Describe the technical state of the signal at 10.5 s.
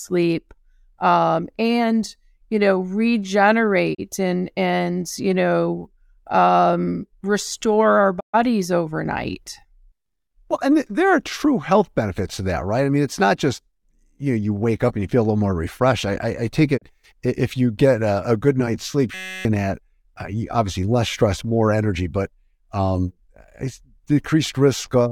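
At 10.5 s the speech signal is intact, with no audible technical fault at that moment.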